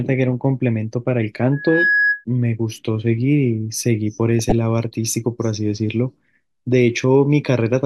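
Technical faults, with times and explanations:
1.52 to 2.25 s, loudspeaker feedback squeal: A pure whistle at 1.7 kHz rises out of the speech, swelling over roughly a third of a second until it sits noticeably louder than the talker, then cuts off. The microphone is hearing the loudspeaker it drives, and at 1.7 kHz the round trip through the loop comes back stronger than it left. That single frequency therefore feeds on itself and climbs, while every other frequency dies away.
4.39 to 4.52 s, DAB burbling: For about an eighth of a second the speech turns watery and gurgling, with small chirps and squelchy blips over it. This is weak digital radio reception. A small share of bit errors slipped past the error correction into the compressed audio, and the duration points to several consecutive corrupted frames. Wrong samples put short blips of noise into individual frequency bands, and wrong scale factors that got through made bands jump up or down in level for up to a frame, which produces the bubbling texture.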